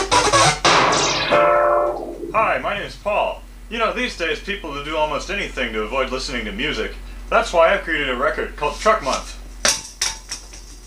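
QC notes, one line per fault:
No faults heard anywhere in this clip.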